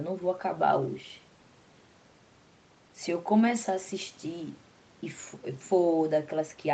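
Nothing stood out on listening to this speech recording, which carries the narrower top end of a call path, with no content above about 8 kHz.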